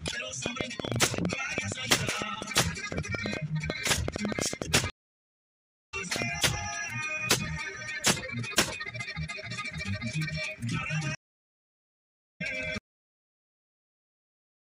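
From 0.08 to 6.23 s, a train of clicks, about 50 irregularly spaced pops at roughly 7.9 per second, peaks near 15 dB above the sound. This is likely interference, since the near-identical pulses persist through pauses rather than tracking the signal. At 4.90 s, a stream reconnect: 1.03 s of silence, then the audio resumes about 0.7 s further on. The jump forward in the material distinguishes it from a plain dropout. A second reconnect at 11.15 s gives 1.25 s of silence and resumes about a second later. At 12.78 s, a cut-off end: the sound stops mid-event into digital silence with no decay, unlike a fade or a natural ending.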